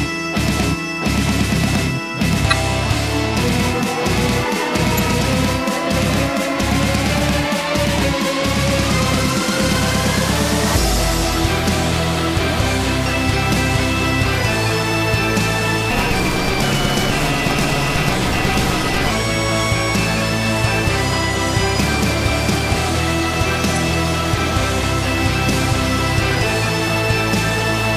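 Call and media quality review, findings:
Corrupt frame decoded, 2.50–2.53 s, 4.97 s, 23.76 s: short chirpy blips, the first the strongest, the others around 10 and 15 dB below it. Decoder played a frame or two with flipped bits, so misread gains or codes put energy at the wrong frequencies.

Block size mismatch (truncated), 15.90–19.11 s: 172 Hz buzz and audio running 1.88x fast with timbre intact. Some stage hands over longer blocks than the next one reads, so each block's tail gets dropped; the buzz rate fits a 256-sample read.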